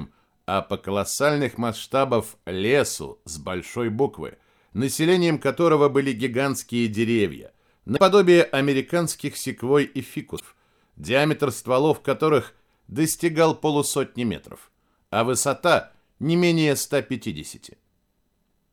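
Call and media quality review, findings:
Damaged data in compressed stream: brief glitches at 7.93–7.99 s and 10.36–10.41 s. Decoder misreads corrupted frames, loses sync, resyncs at next header.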